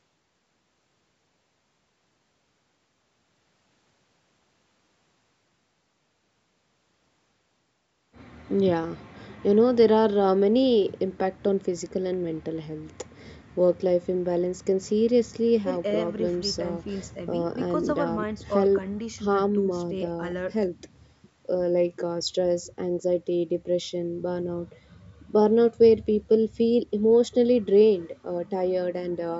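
Listening to this speech recording, nothing stood out as a technical fault; the lowest bass is trimmed by call microphone processing, as is normal, and the content stops at about 8 kHz.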